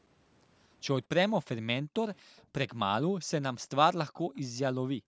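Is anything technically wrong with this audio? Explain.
Yes, there are two problems. Background gated by the echo canceller: the room sound drops out at 1.83–1.94 s, 2.22–2.45 s and from 4.97 s to the end, dips of about 33 to 40 dB where the canceller clamped the mic while the far end played. There's also an echo leak at 2.37–2.44 s and 4.36–4.40 s: a very faint copy arriving 233 ms late, likely far-end sound the canceller didn't fully remove. The call mic processing, with nothing above 8 kHz, is normal.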